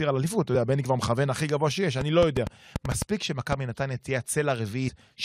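A train of clicks runs from 2.01 to 3.53 s, around ten sharp ticks at an uneven pace of about 5.3 per second, standing roughly 15 dB above the speech. Such matching, repeated pulses likely come from electrical interference or a faulty connection or power supply.

Compressed frames are skipped at 4.87 to 4.89 s. The decoder drops whole frames, either lost or rejected as damaged, so the speech leaps ahead by about a tenth of a second.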